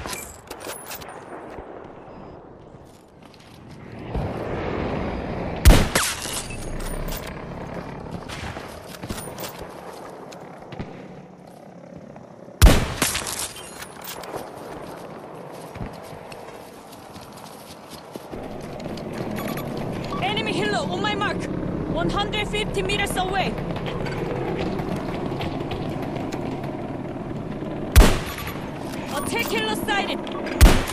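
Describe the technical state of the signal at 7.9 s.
Nothing is wrong with the signal at 7.9 s, and the audio runs through that point intact, with no dropout, distortion or glitch.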